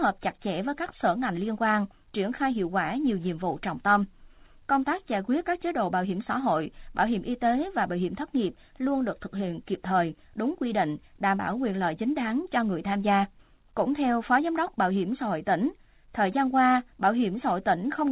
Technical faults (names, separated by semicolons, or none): none